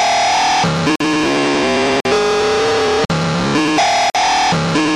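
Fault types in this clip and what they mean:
Gap between chunks: the audio is split into one-second chunks with roughly 48 ms of silence between them, so four short holes punctuate the sound.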